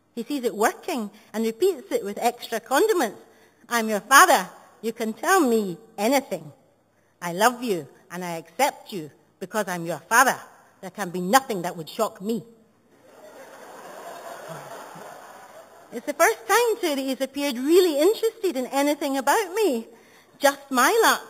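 Throughout, the audio carries imaging from sample-and-hold upsampling. Samples were repeated without smoothing, which fits a jump from 8 kHz to 48 kHz. A mirror image fills 4 kHz to 8 kHz, about 13 dB down. It is a bright metallic fizz that follows the level.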